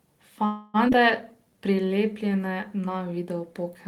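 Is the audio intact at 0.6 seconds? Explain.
No, 0.6 s sits inside a call audio freeze running from about 0.45 to 0.76 s. The last sound is stretched into a fading buzz or hiss for roughly 285 ms, likely because delayed packets drained the jitter buffer; speech then resumes where it stopped, nothing lost.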